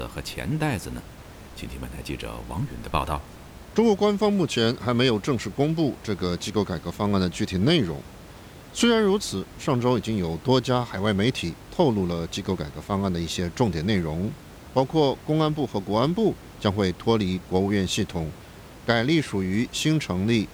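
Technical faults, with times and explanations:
No technical faults can be heard anywhere in the recording. A low room noise sits about 20 dB below the speech, part of the recording space rather than the system.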